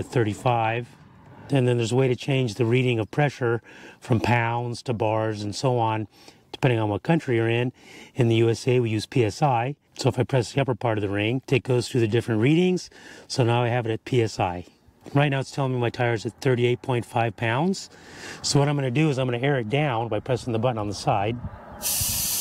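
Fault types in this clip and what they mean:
No fault can be heard anywhere in this clip. Nothing in it points to a problem in how the audio was captured, processed or carried.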